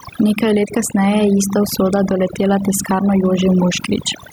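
Throughout the speech, overdone noise removal pulls individual frequency bands down whenever they sit near the noise estimate, leaving twinkling specks rather than broadband hiss or dropouts. The level also swings by around 10 dB, with loud and soft parts squashed closer together, likely gain pumping from a fast limiter catching excessive gain, unlike steady compression. The room noise itself sits about 45 dB below the speech.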